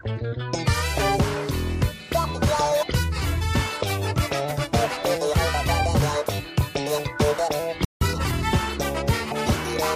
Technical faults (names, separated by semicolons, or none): compressed frames skipped; playback stall; time-compressed catch-up